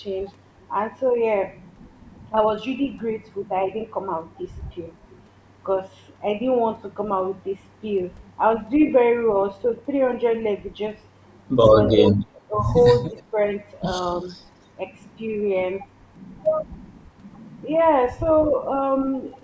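A speech recording with brief level dips that point to speech suppressed in double talk, likely the echo canceller turning down the near talker while the far side also spoke. They fall at 8.6 to 8.8 s (about 5 dB), 11.97 to 12.57 s (about 20 dB, roughly half a second affected) and 13.11 to 13.37 s (about 10 dB), showing as sudden notches in the waveform envelope and faded, gappy harmonics on a spectrogram. Echo leak appears at 11.89 to 11.96 s and 13.08 to 13.23 s as a delayed copy of the voice about 305 ms behind the original, at about 10 dB and about 25 dB below it, likely residual loudspeaker pickup the canceller missed. On a spectrogram it shows as weak, smeared duplicate harmonic traces shifted right of the original. Across the spectrogram, energy stops at 8 kHz, as expected from the call's microphone processing.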